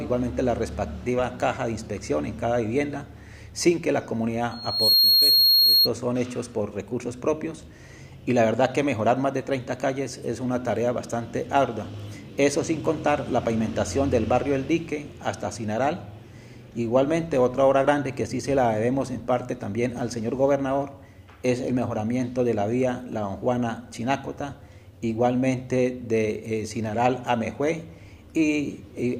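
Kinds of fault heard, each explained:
Loudspeaker feedback squeal: the mic is catching its own speaker, and around 4.3 kHz the loop gain tips past one, so that tone feeds itself. It swells over roughly 0.4 s from 4.51 s, sits something like 10 dB above the sound, then drops out at 5.89 s.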